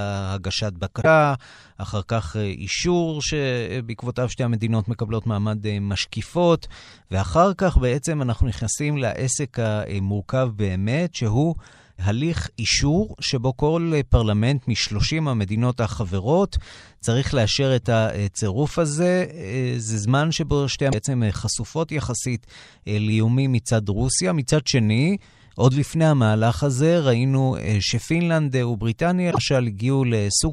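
Damaged data in a compressed stream is heard three times in this speech recording: at 0.98 to 1.05 s, 20.89 to 20.94 s and 29.27 to 29.38 s. Each is a brief chirp or blip lasting between about 50 and 100 ms. Corrupted bytes in those stretches leave the decoder unable to read its frames correctly. It loses sync, emits garbage until it finds the next valid frame header, and then resumes normal decoding.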